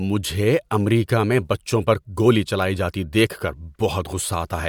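No technical faults are audible.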